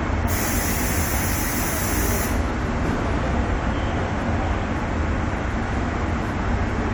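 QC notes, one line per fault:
No faults found in this clip. Nothing calls for a timed entry.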